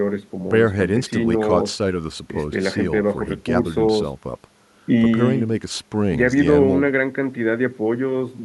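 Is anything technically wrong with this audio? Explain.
No, nothing technically wrong can be heard here.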